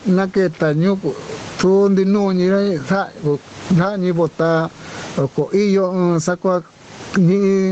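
Throughout the speech, gain pumping is audible: the gain ducks by around 25 dB under each loud syllable, likely from excessive microphone gain driving a fast limiter. The waveform looks flattened, with peaks squashed, all within a band that stops near 8 kHz.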